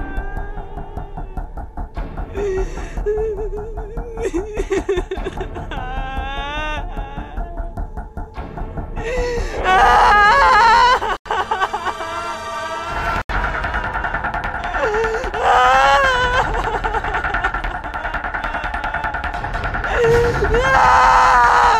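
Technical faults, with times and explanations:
11.17–11.26 s and 13.22–13.29 s, Bluetooth stall: the audio drops to clean silence for about 88 ms and then 78 ms before carrying on, likely a wireless link starving the headphone buffer. Unlike codec concealment, nothing fills the gaps: no smearing, warble or repeated fragments.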